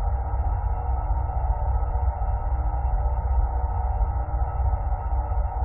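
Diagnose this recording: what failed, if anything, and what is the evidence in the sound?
The failure is in the compressed data itself, so this is a codec-stage problem, specifically damaged data in a compressed stream. At about 1.9 s there's a very short burst, roughly 14 ms, where the sound turns into a quick chirp or blip that doesn't belong to the sounds around it. What's happening is that part of the encoded file was corrupted, so the decoder misreads those frames, loses its sync, and produces garbage until it locks onto the next valid frame header.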